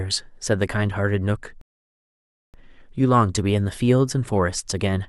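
At 1.61 s the speech cuts to dead silence for about 0.92 s, then picks up at 2.54 s exactly where it broke off, with nothing missing. That is a rebuffering stall: the player exhausted its downloaded audio and waited for more, adding time rather than losing any.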